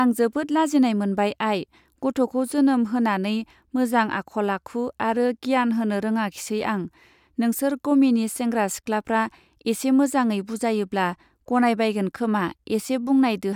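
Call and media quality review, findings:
No call or media quality faults found in this review.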